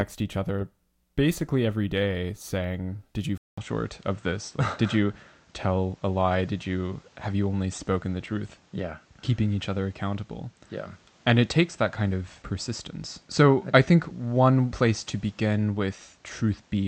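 At 3.38 s the speech drops out for 200 ms, then returns duller, with nothing above 8.4 kHz, a level shift of roughly 5 dB and a new noise floor about 35 dB down. This points likely to an input switched to a poorer device, persisting to the end.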